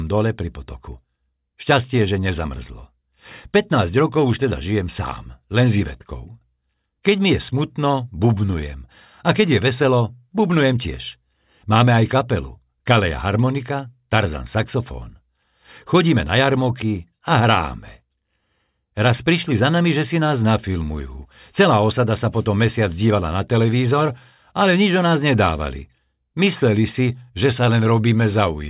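No dropouts, clipping, glitches or other technical faults can be heard anywhere in the recording.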